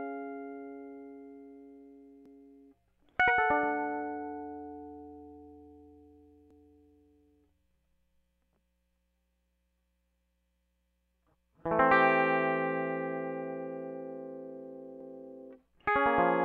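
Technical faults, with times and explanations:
2.26–2.51 s, 6.51–6.76 s and 15.01–15.26 s, overlapping chunks: the music was handled in 4-second chunks, each starting 250 ms before the previous one finished, so a quarter-second slice plays twice at each join, giving that brief stutter and click.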